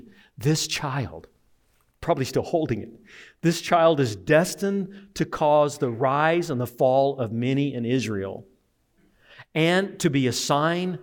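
No technical faults are audible anywhere in the speech recording.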